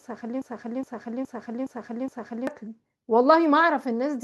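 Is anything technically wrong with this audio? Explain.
Yes. From 0.42 s to 2.47 s there is a broken-record loop. A 0.42 s slice of speech repeats exactly, back to back, five times. The likely cause is a stalled player or stream resending its last held fragment. The speech due in that span is lost.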